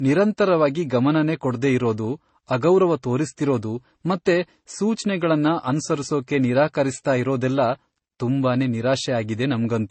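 From start to finish, the speech is band-limited, with nothing above 8.3 kHz. Two kinds of damage sit on top of each other. There is swirly, watery smearing and a gritty roughness on sibilants and transients. The likely cause is transcoding between lossy codecs. The sound points to a low-bitrate MP3 encode, around 32 kbit/s, then re-encoded as AAC-LC at a similar rate. The second codec wasted bits reproducing the first one's artefacts and added its own.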